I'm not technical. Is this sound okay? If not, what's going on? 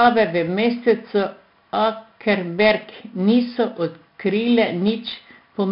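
No, not quite. The whole clip has been squeezed with 4-bit ADPCM compression, an old trick that stores each moment of sound as a tiny guess-and-correct step. Here it's done heavily, so the speech carries a gritty hiss that swells whenever it gets louder, and sharp consonants come out rough. There's also nothing above about 5.3 kHz, which is why the voice sounds dull and muffled from start to finish.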